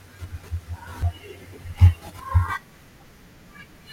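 A speech clip with three small jumps at 1.02 s, 2.07 s and 2.94 s, each one where about 20 ms of sound goes missing, most likely a dropped buffer (overrun). Unlike a dropout, no silent gap appears: the sound simply skips ahead.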